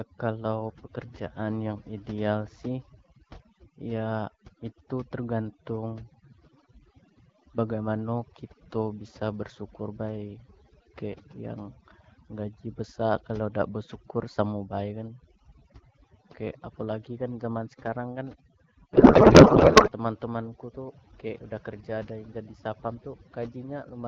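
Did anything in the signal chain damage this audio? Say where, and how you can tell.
Yes. Overdone noise removal in call processing runs throughout: the background drops and breaks up into twinkling specks, unlike codec roughness.

A codec payload misread at the network stage hits from 18.93 to 19.92 s. The speech turns to garbled warble, not silent gaps, which fits octet-aligned AMR being read as bandwidth-efficient.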